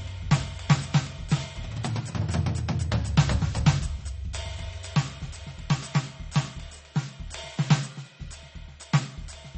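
Right from the start and all the way through, the music has a hard ceiling at about 8.4 kHz and a watery, swirling texture with smeared attacks. That's plainly audible MP3 compression, likely from a very low bitrate around 32 kbps, where weak frequency lines flicker between frames.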